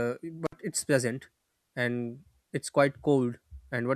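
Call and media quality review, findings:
Speech drops out abruptly with crackle at both edges and faint hiss in the gap, 0.46 to 0.53 s, just before "it's pleasant". Intermittent contact: a loose cable or plug opening for about 58 ms, then reconnecting.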